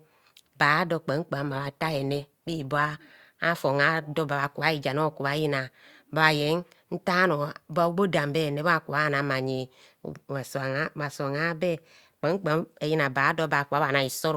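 From 1.39 to 3.39 s the speech abruptly sounds rougher and more processed, with added codec artefacts, then snaps back, with no gap either way. This is an adaptive stream at a lower bitrate, consistent with a temporary switch from roughly 64 to 24 kbit/s Opus.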